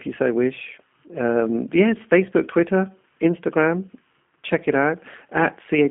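From start to finish the speech carries G.729 codec damage: a low-rate model rebuilds each frame from a filter and a few pulses, consistent with 8 kbit/s, leaving a rough, synthetic texture. A spectrogram shows energy confined to about 200 Hz–3.5 kHz, with nothing above 3.7 kHz.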